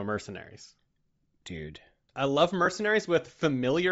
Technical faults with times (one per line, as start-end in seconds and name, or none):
0.00-3.92 Bluetooth LC3 compression
0.63 lost LE Audio frames
2.65-2.67 lost LE Audio frames